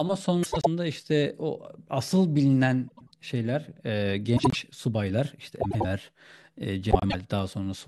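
Speech, with frames out of order at 0.43–0.67, 2.88–3.11, 4.36–4.55, 5.61–5.85 and 6.91–7.15 s. Each time, two neighbouring blocks of 96 ms play swapped. At 4.36 s the blocks are 72 ms. The result is a garbled flutter. No time is lost.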